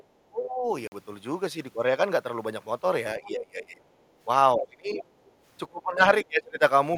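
A speech recording, about 7 s long, that sounds like a speakerphone call where the echo canceller is struggling. Right at the start, 0.0 to 0.04 s, and again at 5.25 to 5.32 s, there's a faint scrap of another voice, roughly 30 to 35 dB under the talker. That's the other side's voice leaking through, most likely loudspeaker echo the canceller didn't fully remove from the mic. It's brief and quiet, but it's a separate voice sitting under the main one. The most frequent fault is speech suppressed in double talk, which happens five times: 0.06 to 0.65 s, 3.19 to 3.82 s, 4.58 to 5.04 s, 5.69 to 6.03 s and 6.24 to 6.62 s. In each of those the talker ducks hard, roughly 35 dB down in the first, around 20 dB in the second and about 25 dB in the rest, with each lasting somewhere between 0.3 and 0.7 of a second. The likely cause is the canceller hearing both sides at once, failing to separate the near voice from the echo, and turning everything down. 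At 0.87 to 0.92 s there's a clean hole of about 46 ms, and the audio picks up afterwards as if it had kept playing. That's likely a Bluetooth dropout on the headphone link, and its length fits two lost packets. Finally, at 4.1 to 4.18 s the room tone dips by about 9 dB for around 70 ms and then recovers. That's background gated by the echo canceller, clamping the mic while the loudspeaker was active and then releasing it.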